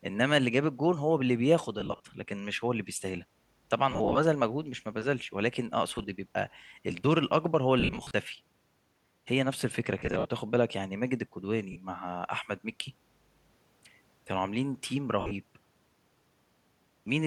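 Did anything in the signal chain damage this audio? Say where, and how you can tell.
Yes: brief noisy, smeared dropouts in the speech at 1.80, 3.91, 5.95, 7.80, 9.99, 11.72 and 15.21 s are lost LE Audio frames on the Bluetooth link, concealed by the LC3 decoder.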